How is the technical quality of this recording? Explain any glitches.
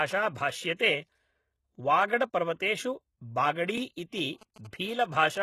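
The recording has clear technical problems: codec damage runs through the whole speech clip, there are several pre-echo smears on attacks, and radio interference buzzes through the last second.

HE-AAC compression: Throughout, the treble sounds synthetic and nothing is present above 12.3 kHz. The damage is plainly audible, which points to a low bitrate of around 16 kbps. The likely cause is HE-AAC. It keeps only the lower band and regenerates the treble by copying lower bands upward under a coarse envelope, so the upper harmonics don't line up with the real ones. This gritty, metallic treble differs from a plain low-pass, which would sound dull rather than artificial.

Pre-echo: A short hiss comes just before sharp attacks at 0.35 s, 0.76–0.79 s, 2.08–2.10 s, 4.37–4.41 s and 4.54–4.56 s. These smears last 12 to 46 ms. The codec spreads its quantisation noise across a whole transform block, so when an onset lands late in a block, noise sized for the loud part spills into the quiet moment ahead of it. 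Because the hiss comes before the attack, it cannot be reverb or an echo, which would trail after.

GSM signalling bursts: From 4.18 s to 5.37 s there is a galloping dit-dit-dit of short buzzes repeating at about 217 Hz, well below the speech level. A nearby 2G phone exchanging signalling bursts with the network is being rectified by the audio circuitry. The irregular gallop identifies the signalling state, which differs from the even ticks with a longer buzz twice a second heard during a silent call. It is also distinct from steady mains hum.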